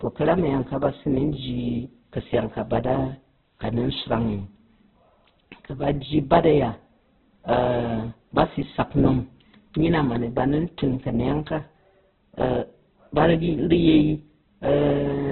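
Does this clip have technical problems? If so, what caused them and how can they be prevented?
Yes. Opus compression throughout the speech: nothing is left above 4.2 kHz, so it sounds narrowband and muffled, with rough, grainy, noisy texture where the codec filled starved bands. This is likely heavy music-mode encoding at a very low rate, around 8 kbps. Encoding at a higher bitrate with full bandwidth would prevent it.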